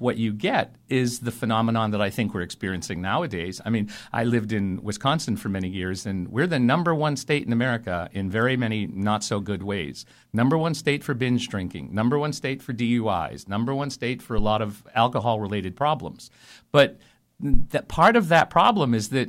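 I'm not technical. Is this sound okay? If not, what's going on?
No. At about 14.38 to 14.53 seconds, and again at 17.54 to 17.65 seconds, the microphone's power supply was switched while it was still live. This is called a phantom power thump. The sudden jump in electricity leaks into the recording as a deep, low thud that dies away in a few hundredths of a second. The second thump, at 17.54 seconds, is noticeably louder than the first.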